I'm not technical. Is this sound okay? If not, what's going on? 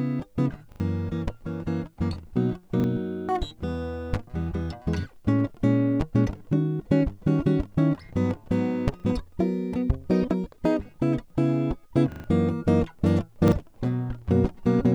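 No. Five times, fresh music failed to reach the player in time, so it replayed the last short chunk it had, which sounds like a chunk of about 40 ms. This is a repeated buffer. You hear quick stutters at 0.72, 2.8, 9.0, 12.12 and 13.48 seconds, with the ones at 0.72 and 12.12 repeating longest.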